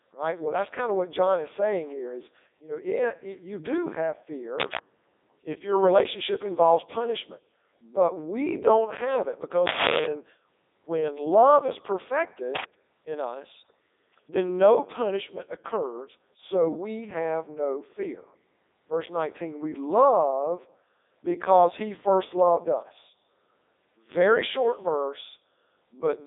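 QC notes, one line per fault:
Throughout, Codec 2 vocoder: the speech sounds robotic and buzzy, band-limited to 300 Hz to 3.7 kHz with nothing above 3.8 kHz. The voice is resynthesised from sine waves using only pitch, voicing, energy and envelope, so the waveform is lost. The damage is heavy, even at 3.2 kbit/s.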